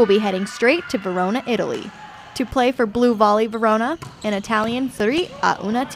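From 4.10 to 5.36 s, CD scratch ticks: eight brief ticks, the longest about 3 ms, where a disc blemish exceeded error correction once per revolution. Their regular spacing distinguishes them from random clicks.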